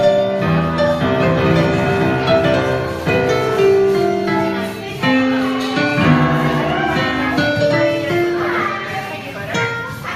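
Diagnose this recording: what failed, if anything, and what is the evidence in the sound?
Nothing failed: no stage in the chain, from wiring and conversion through to storage and playback, leaves any audible trace of a fault anywhere in the recording.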